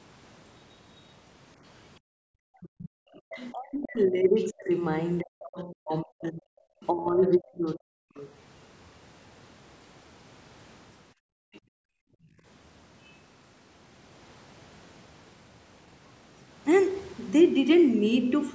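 Right at 2.0 to 2.13 s the room sound drops by about 40 dB for a moment. That's background gated by the echo canceller, which clamps the mic while the loudspeaker plays. From 2.41 to 8.21 s the speech keeps dipping by up to roughly 40 dB, about four seconds in all, most likely speech suppressed in double talk as both ends talk at once. Inside that stretch, faint scraps of the other side's voice leaking through turn up at 3.37 to 3.47, 4.01 to 4.43, 5.9 to 6.27 and 7.35 to 8.19 s. They sit about 30 to 35 dB under the speech, likely residual echo the canceller missed. Then from 11.14 to 12.44 s the background gates out again, around a second of dropouts up to about 40 dB deep, with another brief leak at 11.54 s. Nothing lands above 8 kHz, which is just the call's mic processing and not a fault.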